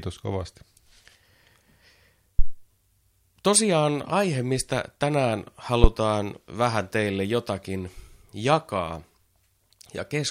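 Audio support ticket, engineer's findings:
Deep low thump at 2.39 to 2.56 s, peaking at about -4 dBFS, decaying over 39 ms. Second, sharper thump at 5.84 to 5.90 s, about -1 dBFS, 13 ms decay. Phantom power thump on both: supply switched on or off on a live input, DC step through the coupling capacitors into the preamp. Check the phantom switching and the input coupling capacitors.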